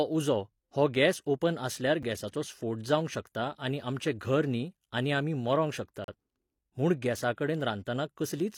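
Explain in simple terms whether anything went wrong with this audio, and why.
A gap between stream segments shows up twice: a tiny 5 ms hole at 2.03 s, and a clearer 38 ms break from 6.04 to 6.08 s. The speech arrives in 4-second chunks whose timings don't quite line up, so the player fills each join with silence. Nothing is lost.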